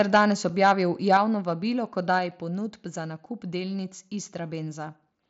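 From the start to 0.21 s the loudest syllables have a harsh, crackling edge. At 0.17 s the voice and background drop together by about 2 dB. The crackle is likely microphone overload: peaks were driven about 4 dB past the converter's ceiling, so a few percent of samples had their tops shaved flat. The drop is likely the call software stepping the microphone volume down in response.

At 0.49 s a short tick marks a 5 ms block of digital silence. The output cuts out and back with no fade.

The same crackle returns from 0.64 to 0.72 s and from 1.12 to 1.17 s, with peaks about 3 dB and 2 dB over and a few percent of samples clipped, again likely microphone overload. Right at 1.17 s the level falls by about 4 dB, and at 2.19 s by about 3 dB more, each likely another microphone volume step-down.

A second 5 ms block of digital silence ticks at 2.31 s. Throughout, the mSBC headset link limits the band to about 7.7 kHz.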